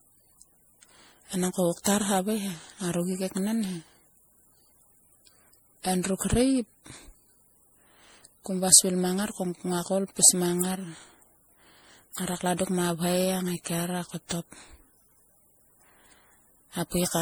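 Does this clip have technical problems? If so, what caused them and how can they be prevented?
Yes. Throughout the speech there is generation loss: the sound is swirly, smeared and hollow, and consonant attacks blur. The likely cause is repeated MP3 decoding and re-encoding, around seven passes, at a rate that fits 64 kbit/s. Each pass requantises on a shifted frame grid, so noise and spectral holes pile up. A single encode at that rate would sound thinner but not this washy. To prevent it, edit from a lossless master and encode only once at the end.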